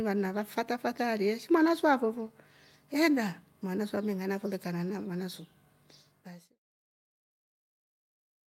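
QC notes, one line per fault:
No faults found; the speech signal ends with a smooth fade-out that begins around 6 s and completes at 6.6 s.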